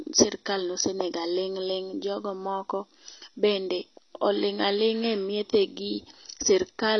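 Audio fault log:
throughout: AAC compression. The speech is dull and smeared, with nothing above 6.2 kHz and a warbling, fizzy texture on sustained sounds and sibilants that is plainly audible. This is likely lossy AAC-LC coding at a low rate, which fits roughly 24 kbps. The encoder lowers its bandwidth to save bits and quantises each block of frequency lines coarsely, so the upper spectrum is dropped and the coarse coding of the remaining lines smears and warbles.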